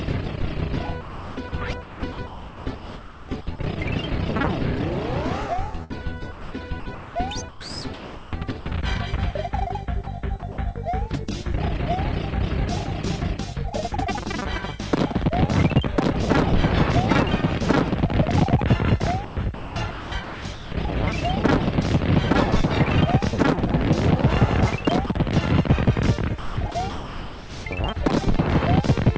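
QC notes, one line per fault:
1.01–3.59 s, 5.84–8.66 s, 10.40–10.58 s, 19.25–20.72 s and 26.39–27.65 s: sound chopped by the voice detector. The sound keeps cutting in and out, with quiet parts swapped for a hiss. Across these spans about 1.6 s, 1.3 s, 0.09 s, 0.9 s and 0.9 s were replaced. The sender's detector likely toggled repeatedly and filled the gaps with comfort noise. That synthetic fill stays within the 8 kHz band of the G.722 call path.
25.07–25.10 s: sound dropped by the voice detector. A 30 ms slice of sound vanishes and gives way to comfort noise before the sound returns. The detector likely judged that quiet moment to be background and stopped sending. The receiver played comfort noise in its place.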